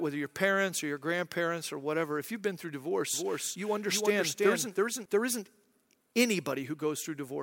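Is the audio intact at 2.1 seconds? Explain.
Yes, at 2.1 seconds the speech is intact, with no audible technical fault at that moment.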